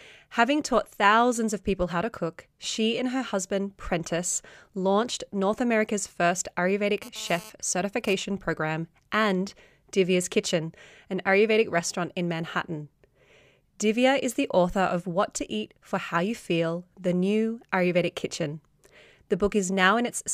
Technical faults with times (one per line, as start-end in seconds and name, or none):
7.02-8.14 GSM phone buzz